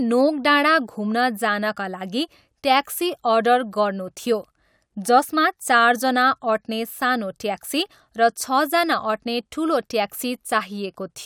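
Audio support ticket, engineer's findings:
No audible faults found in the speech clip; no symptom to attribute to any component in the capture or playback chain.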